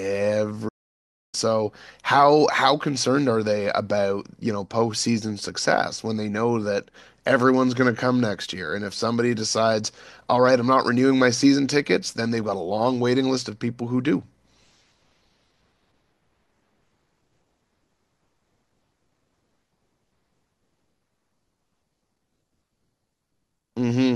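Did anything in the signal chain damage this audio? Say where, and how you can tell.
Yes. At playback, the speech stops abruptly mid-flow at 0.68 s and the output stays silent until 1.35 s, a gap of about 0.65 s, before the sound carries on. This is a playback stall, likely the player running short of data or its output thread being blocked. A natural pause would tail off with room tone. Here the output simply goes silent in mid-flow for a sustained stretch, which rules out a brief click or a short packet dropout.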